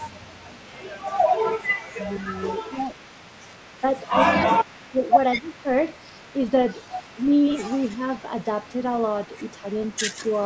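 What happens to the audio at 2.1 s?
Speech suppressed in double talk runs from 1.96 to 2.31 s, covering 2.1 s. The speech dips briefly, by roughly 5 dB at its deepest, with about 150 ms of the span turned down. The likely cause is an echo canceller that heard both sides talking at once, could not tell its own talker from the loudspeaker return, and pulled down the level of everything passing through.

An echo leak is also present at 2.1 s, as it is throughout the clip. A faint delayed copy of the speech trails the original by about 0.2 s, sitting roughly 30 dB below it. It most likely comes from a far end playing the call on a loudspeaker, where the echo canceller left part of what its microphone picked up and sent that remnant back.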